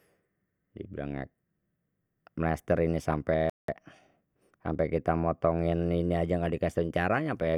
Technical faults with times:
3.50-3.68 playback stall
3.68-4.92 time-compressed catch-up

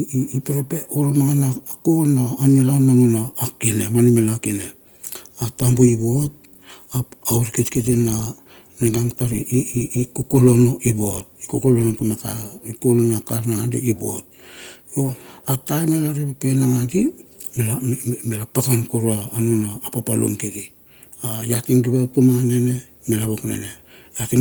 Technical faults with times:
5.81-5.84 hard clipping

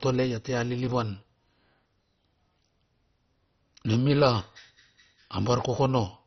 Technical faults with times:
0.00-6.26 MP2 compression

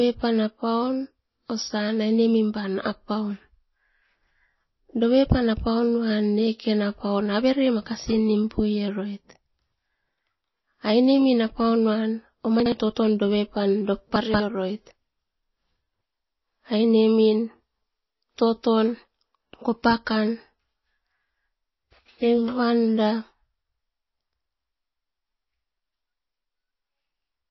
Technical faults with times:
0.00-27.50 MP3 compression
9.60-9.72 chunks out of order
12.60-12.72 chunks out of order
14.16-14.40 chunks out of order

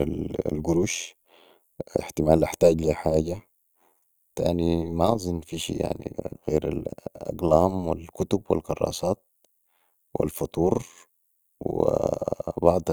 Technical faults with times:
0.00-12.92 overlap-add ripple

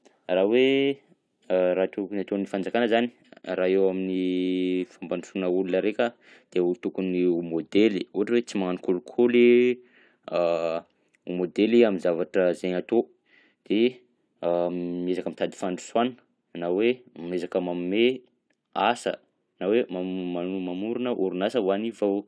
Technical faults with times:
none

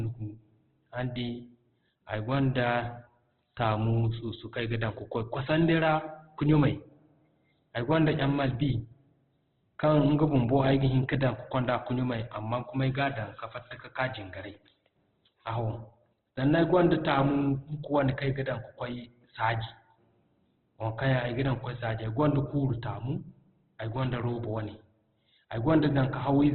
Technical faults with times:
0.00-26.54 Opus compression

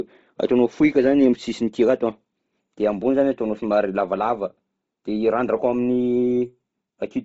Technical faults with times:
0.00-7.24 Bluetooth LC3 compression

